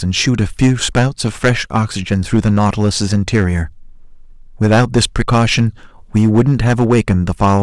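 Hard clipping runs through the whole speech clip. The signal was driven about 11 dB beyond what some stage could pass, so every peak above that ceiling is sliced flat. Only a small share of samples, around three percent, hit the limit, but each loud syllable gains a harsh, crackly fuzz. On a waveform the peaks show squared-off plateaus; a spectrogram shows bright vertical smears of added harmonics reaching high up the spectrum at each loud moment.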